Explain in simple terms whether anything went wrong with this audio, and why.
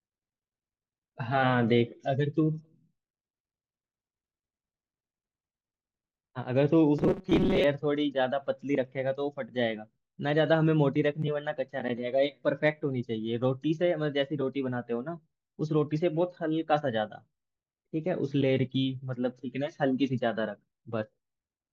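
From 6.99 to 7.64 s the speech becomes a stiff, metallic 188 Hz buzz. This is robotic sound from repeated short buffers, likely tiny chunks replayed in place of missing audio.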